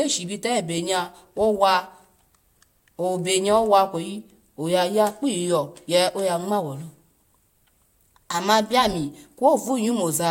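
No technical fault can be heard anywhere in the speech recording; the signal holds steady throughout, with nothing interrupting or altering it.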